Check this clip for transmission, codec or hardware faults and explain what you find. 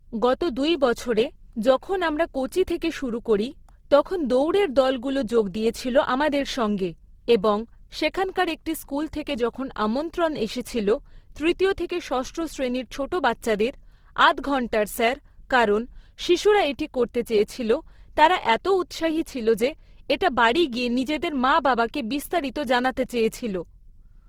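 One fault runs through the whole clip: likely Opus compression. The speech sounds rough and grainy, consistent with a low rate near 16 kbps in music mode, where starved bands are refilled with folded or noise content. A spectrogram shows full but speckled, smeared upper bands with no clean holes.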